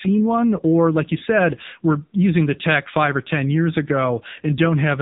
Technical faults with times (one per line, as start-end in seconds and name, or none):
0.00-5.02 AMR narrowband mobile codec